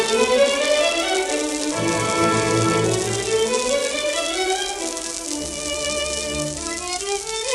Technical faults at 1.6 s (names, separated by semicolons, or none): none